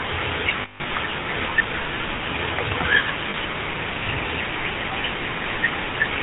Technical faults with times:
0.00-6.22 GSM full-rate codec
0.62-0.91 lost GSM frames
3.30-3.35 lost GSM frames

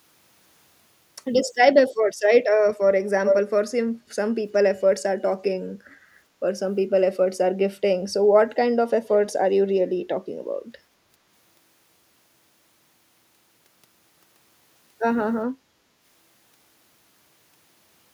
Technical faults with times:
3.25-3.39 echo leak
9.09-9.14 echo leak

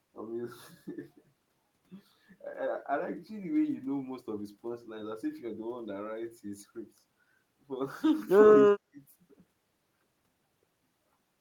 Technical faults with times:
8.64-9.03 speech suppressed in double talk

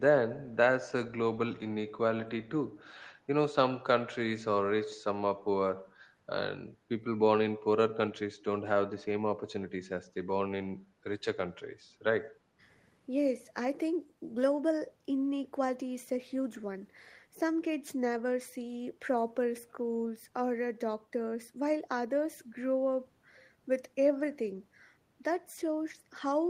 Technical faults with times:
12.36-12.59 background gated by the echo canceller

